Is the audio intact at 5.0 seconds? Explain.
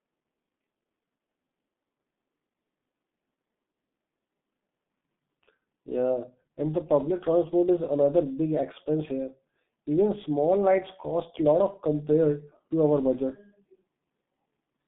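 No. At 5.0 s the speech is in the middle of G.723.1 codec damage that runs through the whole clip. The sound points to a very low bitrate, around 6 kbit/s, with the codec rebuilding each 30 ms frame from a coarse, slowly updated model of the voice. Nothing survives above 3.8 kHz and the band sits roughly between 150 Hz and 3.6 kHz, so the speech is heavily muffled and hoarse, with smeared consonants.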